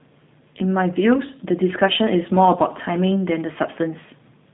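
From start to finish the speech sounds rough and faintly synthetic, with a narrow telephone-like tone: nothing is heard above about 3.8 kHz, and the band sits roughly between 150 Hz and 3.7 kHz. This is G.729 codec damage, plainly audible. The codec rebuilds each short frame from a vocal tract model, a pitch predictor and a few pulses instead of the real waveform, which fits an 8 kbit/s G.729A stream.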